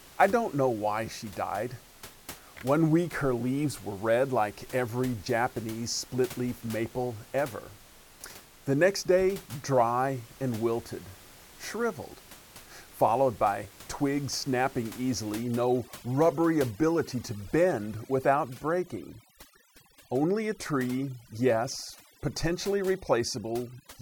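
From 15.39 s, right after "followed by twigs snapping", to the end, the background drops and breaks up into twinkling specks. This is overdone noise removal: bands near the estimated room noise, which sits about 22 dB below speech, are cut along with quiet speech.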